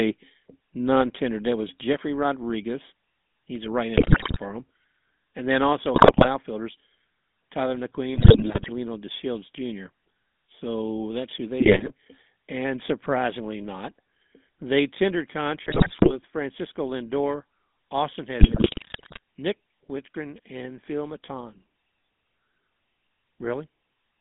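Speech heard through the GSM full-rate codec throughout, with a buzzy, gravelly roughness typical of the 13 kbps full-rate coder. It rebuilds the voice from a vocal-tract filter excited by sparse, regularly spaced pulses, which discards much of the fine detail. The line is band-limited to about 150 Hz to 3.6 kHz, so a spectrogram shows a hard ceiling with nothing above 3.6 kHz and little energy at the very bottom. GSM bit errors break the speech at 3.96–4.39 s, 5.94–6.29 s, 8.14–8.70 s, 11.60–11.92 s (just after "that's who"), 15.64–16.16 s and 18.40–19.19 s. Corrupted filter, pitch and gain parameters reach the decoder, producing squawks, pops and gargling. On a waveform these bursts appear as sudden amplitude spikes and jagged level jumps. On a spectrogram they show as smeared, misplaced formant bands and bright vertical blotches that break the normal harmonic pattern.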